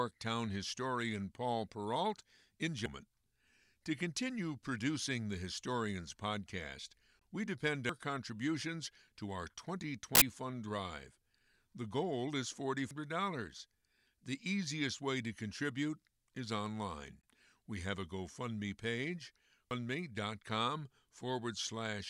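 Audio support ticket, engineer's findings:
Gap between chunks at 7.19 s and 17.21–17.23 s in the speech. Hard-edged holes of 20 ms, about 10 s apart, so content is intact but split at each chunk join. Probable component: codec or player, adding padding or a late start per chunk.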